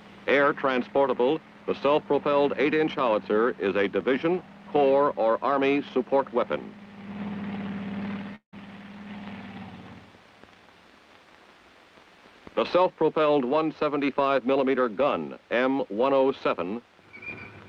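At 8.35 s the sound smears into a fading buzz for about 170 ms, goes silent for 120 ms, then resumes at 8.55 s with about 180 ms of material gone. That's likely a long network dropout, with the receiver stretching the last audio before giving up.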